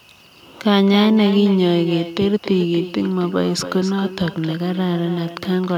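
Speech running the whole way through with echo with no canceller: every phrase comes back roughly a third of a second later, about 13 dB down, thinner, from a far-end loudspeaker feeding its microphone.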